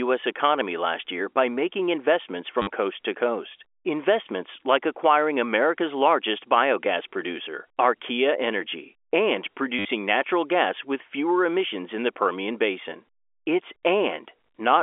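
A brief robotic stutter breaks the speech at 2.62 s, between "year by making investments" and "coast to coast", and again at 9.79 s, just before "natural gas". This is packet loss with the last packet repeated: for 50 ms and then 60 ms the receiver replayed its final packet, which fits 10 ms packets. These replays repeat at the packet rate, so they buzz. The speech is band-limited to the telephone line by G.711 coding.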